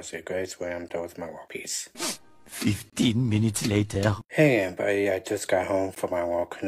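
Short hard-edged dropouts land at 0.89 s, 2.90 to 2.93 s, 3.95 s and 5.95 s, a gap between stream segments each time. Timestamps on adjacent one-second segments don't quite meet, so silence fills holes of about 15, 28, 3 and 15 ms while the audio itself stays intact.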